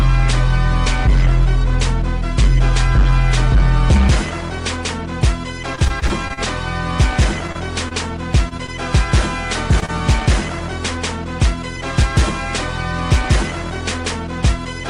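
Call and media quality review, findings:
Repeated packet loss (robotic sound), 5.75–6.39 s and 7.47–8.70 s: choppy, pieces missing. Network loss, decoder concealment extending prior sound across 9 then 6 gaps, longest 37 ms.

Short concealed packet loss, 9.80–9.84 s and 9.86–9.90 s: brief smears. Two 20 ms losses, jitter buffer/decoder filling each hole then blending back.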